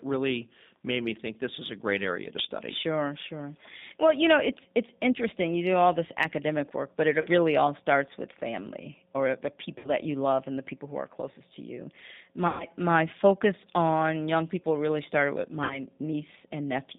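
The whole speech clip passes through the G.729 codec at 8 kbit/s. The band runs from 150 Hz to 3.7 kHz, and the speech sounds plainly rough and synthetic.

VoIP packet loss, concealed by the speech codec, follows at 7.21 to 7.28 s, between "this academic work but" and "really all starts with". It recurs at 9.78 to 9.90 s, after "with family or the". It hits again at 12.48 to 12.64 s, after "are closest to you". The last comes at 15.64 to 15.82 s. Each gap sounds like 30 to 120 ms of missing audio. The decoder stretches the last sound into a fading buzz or coloured noise, and the speech stays weak briefly afterwards.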